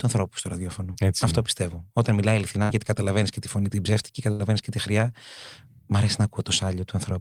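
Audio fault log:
0.93 to 0.97 s, short concealed packet loss. A tiny slice of the speech arrived too late to be decoded. The receiver covered the hole with about 12 ms of made-up sound, extending what came just before, then eased back into the real signal. About 20 ms of the original is gone. It comes through as a quick smear or small wobble. A very brief consonant here could drop out entirely.
2.63 to 2.71 s and 4.31 to 4.41 s, burst of packet loss. In each spot a run of speech failed to arrive in time to play. The receiver stretched the last sound to bridge the gap, about 67 ms in the first case and 77 ms in the second, letting it fade as it went. A voiced sound turns into a held buzz. An unvoiced one becomes a dying hiss. The speech then picks up further along. Roughly 60 ms and 80 ms of the original are lost.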